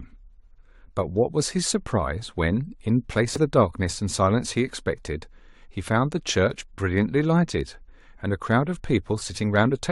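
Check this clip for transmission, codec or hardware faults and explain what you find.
One fault is present. From 3.36 to 3.38 s, damaged data in a compressed stream makes the decoder misread corrupted frames and lose sync, producing a brief glitch in the speech.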